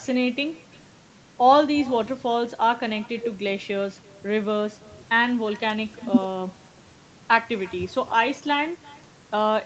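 From start to finish, the speech carries an echo with no canceller. At the far end, the call played through a loudspeaker, and the microphone there picked it up again. Nothing removed it, so the sound returned after the network round trip. Each phrase is followed, about a third of a second later, by a faint copy. It sits about 24 dB below the speech. The copy is thin, and the whole clip is capped near 8 kHz.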